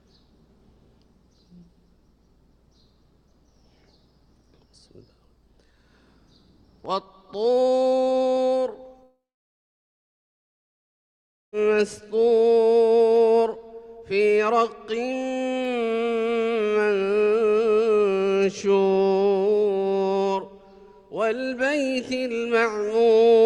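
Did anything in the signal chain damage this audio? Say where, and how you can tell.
Yes. A long network dropout runs from 9.03 s to 11.54 s. The last sound smears into a fading buzz. Then about 2.3 s of near silence follows. Audio resumes at 11.54 s with 2.5 s gone. The receiver likely filled a gap left by lost packets.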